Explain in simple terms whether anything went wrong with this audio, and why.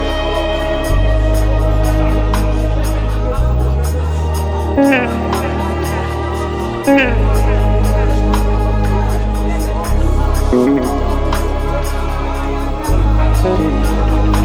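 Something went wrong in the step that converts the audio to a different sample rate: the resampler restarted on every block. It handled the sound in separate 40 ms pieces, each as if nothing came before or after it, so every seam between pieces is slightly wrong. From start to finish, that puts a small tick at each seam, 25 times a second, close enough together to sound like a faint buzz whenever there is sound.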